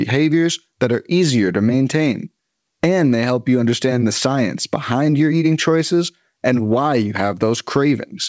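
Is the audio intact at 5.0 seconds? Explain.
Yes, the audio at 5.0 seconds is intact, with the speech passing through the call path cleanly and only the usual G.722 band limit, with nothing above 8 kHz.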